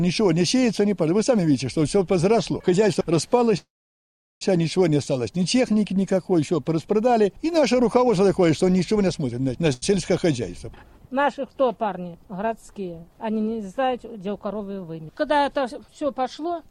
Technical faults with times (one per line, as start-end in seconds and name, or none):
3.57-4.43 call audio freeze
9.73-9.84 short stall from a late packet
13.97-14.61 jitter buffer speed-up